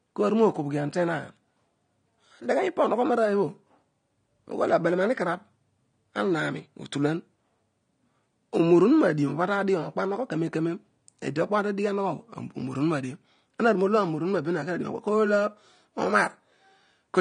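From start to finish the speech carries plainly audible AAC compression artefacts, likely from AAC-LC coding at a rate consistent with about 32 kbps. Nothing is present above 9.7 kHz, so the sound is dull, and the coarse quantisation leaves a smeared, warbling texture on sibilants and sustained sounds.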